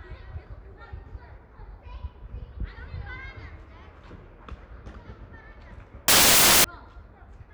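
This everyday-sound recording has one fault: samples built from the wrong bytes between 6.08 and 6.64 s. For that half-second the reader assembles each sample incorrectly, whether offset by a byte, in swapped order or under a wrong alignment, so the rapidly fluctuating low-order bits land in the most significant position. The result is a burst of loud, harsh broadband noise.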